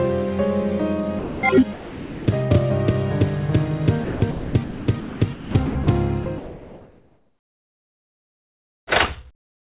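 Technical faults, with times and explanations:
1.19–1.43 s, 1.73–2.27 s and 6.23–6.26 s, sound dropped by the voice detector: sound gives way to steady noise for 240 ms, 540 ms and 30 ms, likely because the sender's detector judged it background and stopped sending.
4.04–5.87 s, sound chopped by the voice detector: transmission likely switched on and off repeatedly, with about 1.2 s replaced by synthetic fill, so the sound turns choppy.
6.23–8.87 s, comfort noise in place of the background: for about 2.5 s the real background becomes a flat, featureless hiss, likely generated by the receiver while the sender paused transmission.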